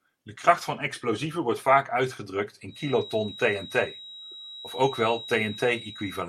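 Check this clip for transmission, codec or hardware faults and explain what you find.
One fault, a feedback whistle. From 2.65 s to the end, a loudspeaker-to-microphone loop likely hovers at the edge of feedback, sustaining a thin 3.8 kHz whistle roughly 15 dB below the speech.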